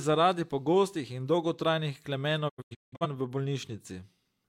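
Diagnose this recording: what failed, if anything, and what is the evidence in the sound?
Right after "zaradi pogostih in dolgotrajnih", the speech breaks up between 2.48 and 3.06 s. Over about half a second it drops into several short silent holes, each faded out in 20 ms, with the longest about 171 ms. Roughly 384 ms of speech is simply gone. This is a digital broadcast dropout at the reception stage. Corrupted or missing frames failed their checks, and the receiver muted each one until valid frames resumed.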